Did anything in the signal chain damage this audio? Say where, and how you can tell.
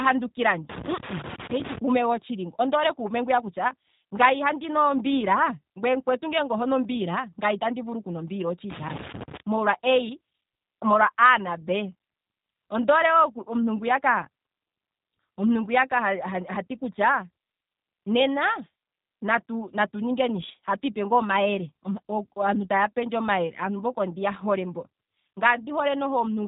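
Yes. At the analogue wiring stage, a loose connector crackle runs from 0.69 to 1.78 s, just before "kuume gotshili ngo ondoole". A worn contact making and breaking chops the signal into irregular scratching. The waveform shows ragged gaps and spikes, and the spectrogram shows scattered full-band vertical streaks.

The codec stage adds G.729 damage throughout. The speech sounds rough and synthetic because it is rebuilt from a vocal tract model and sparse pulses, at a quality that points to 8 kbit/s. On a spectrogram, everything stops sharply near 3.8 kHz, with smeared, blocky harmonics below.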